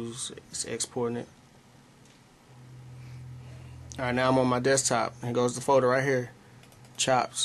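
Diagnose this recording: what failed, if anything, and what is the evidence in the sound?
Nothing in the signal chain shows evidence of failure: level, continuity and timing hold steady throughout, with no break, distortion or irregularity at any stage from capture to playback.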